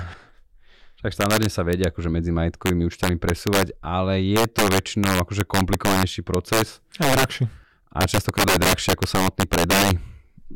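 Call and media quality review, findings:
Integer overflow throughout. Violent cracks on loud speech peaks, harsher than clipping. Gain stage drives signal about 8 dB past integer limit. A small fraction of samples, roughly one or two percent, wrap to opposite sign instead of saturating. Probable component: unclamped mixer or gain sum.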